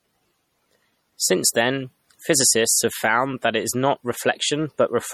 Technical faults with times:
0.00-5.13 MP3 compression

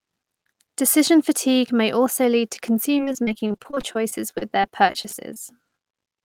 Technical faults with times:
2.97-5.63 repeated packet loss (robotic sound)

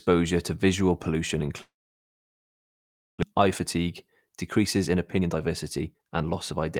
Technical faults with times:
1.61-3.24 long network dropout
4.95-6.52 jitter buffer speed-up

